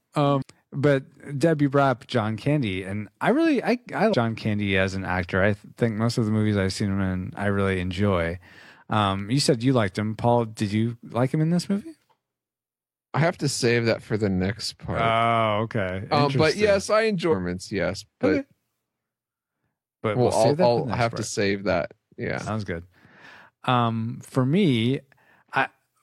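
A speech clip with four short bursts of damaged data in a compressed stream. They fall at 0.38 to 0.42 s, 4.09 to 4.14 s just after "I really I I", 17.28 to 17.35 s just after "but yes I", and 22.43 to 22.50 s. Each lasts roughly 50 to 70 ms. Corrupted bytes make the decoder misread frames and lose sync. It then hunts for the next valid header, producing a brief chirp, squawk, click or short hole.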